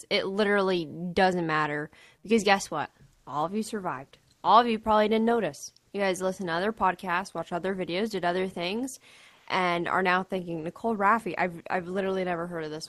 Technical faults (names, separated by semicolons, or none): comfort noise in place of the background